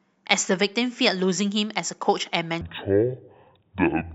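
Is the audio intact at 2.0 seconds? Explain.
Yes, at 2.0 seconds the speech plays through cleanly, with no dropout, click, distortion or other fault at that point.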